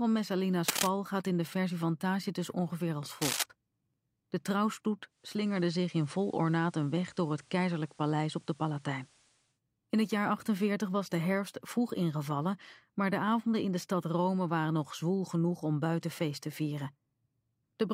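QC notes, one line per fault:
0.68–0.89 s and 3.22–3.43 s, cable scratch noise: brief bursts of dense, ragged scratching, roughly as loud as the sound itself. The likely cause is a worn cable, connector or control being moved, its contact resistance jumping rapidly and injecting the noise.
5.08–9.6 s, digital radio blending to analogue: hiss rises to roughly 35 dB below the sound, and level shifts about 1 dB. The receiver lost digital reception, cross-faded over about 0.45 s to the FM broadcast, then back.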